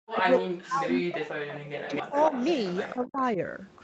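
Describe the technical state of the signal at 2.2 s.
At 2.2 s, an echo leak is present. It runs from 1.85 to 3.06 s. A delayed copy of the speech trails the live speech by about 259 ms. It sits around 15 dB below the direct sound. The far end is likely playing the call on a loudspeaker, and its echo canceller let part of the microphone pickup through. The result is a faint second voice smearing behind the first.

The same moment also falls inside speech suppressed in double talk, from 2.02 to 2.33 s. The talker's level drops by as much as about 30 dB. The dips add up to roughly 150 ms and are heard as brief cut-outs and a dulled top end. The likely cause is the echo canceller failing to separate overlapping talk from the loudspeaker echo and turning everything down.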